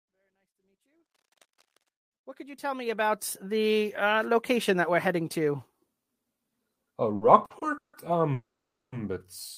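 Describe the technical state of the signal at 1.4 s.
At 1.4 s the speech is overlaid with cable scratch noise, which runs from 1.04 s to 1.91 s. It is heard as dense, irregular scratching and rustling sitting about 10 dB below the speech. The likely cause is a worn cable, connector or control being moved, so that its contact resistance jumps rapidly and injects uneven noise bursts. All of this happens partway through the smooth fade-in that reaches full level at 3.54 s.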